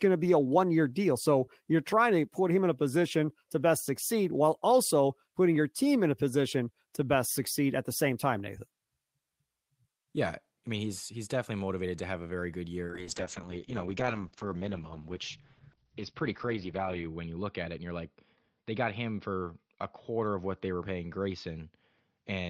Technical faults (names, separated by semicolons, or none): call bitrate drop